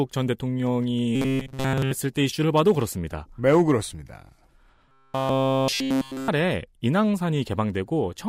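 Speech with robotic sound from repeated short buffers at 1.16–1.91 s and 4.89–6.28 s: a rigid 133 Hz buzz throughout, likely from a roughly 7.5 ms buffer looping.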